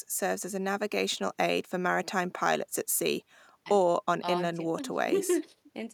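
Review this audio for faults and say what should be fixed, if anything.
Nothing needs to be fixed, since a review of this audio turns up no faults.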